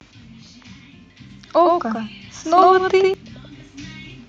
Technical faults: doubled audio track; microphone volume stepped up

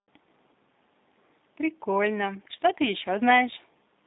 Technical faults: G.729 codec

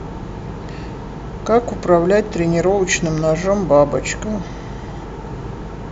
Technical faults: none

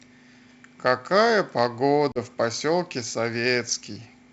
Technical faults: packet loss on an ADPCM call

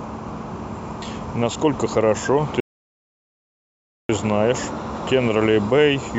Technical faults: rebuffering stall

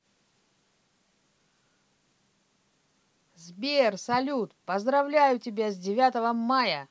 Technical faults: none

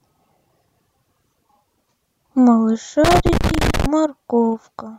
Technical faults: loose connector crackle

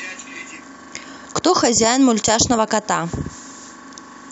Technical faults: none

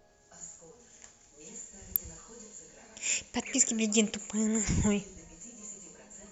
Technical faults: electrical switching spike

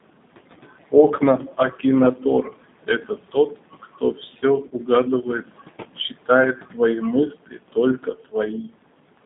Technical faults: noise suppressor artifacts; G.729 codec; speech cut by the noise suppressor; VoIP packet loss concealed by the speech codec

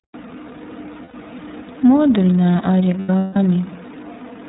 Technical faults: iLBC codec; lost iLBC frames

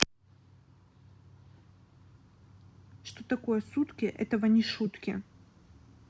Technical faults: none

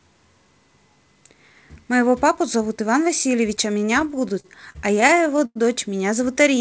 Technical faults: repeated stalls (stutter)

